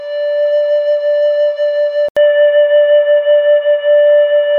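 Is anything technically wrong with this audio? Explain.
Yes. Input switched to a poorer device at 2.09 s: after an 80 ms gap, the music turns dull and boxy, with nothing above 3.8 kHz, a modest level shift and a faint new noise floor. This likely comes from recording switching mid-clip to a narrower-band microphone.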